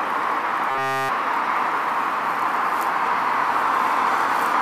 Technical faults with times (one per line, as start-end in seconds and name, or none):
0.69-1.09 robotic sound from repeated short buffers